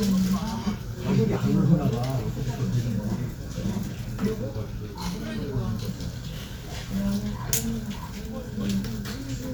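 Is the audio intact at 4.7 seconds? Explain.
No. From 4.53 to 5.88 s there is a drift correction step: clock-matching software likely slowed playback by 5.6% in one jump to rebalance its buffer. Speed and pitch drop together, about a semitone flat, then snap back.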